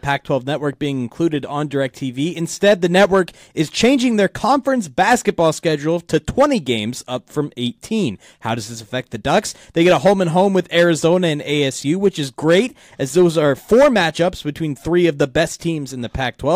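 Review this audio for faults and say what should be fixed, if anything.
No faults turned up in this audio, so nothing needs to be fixed.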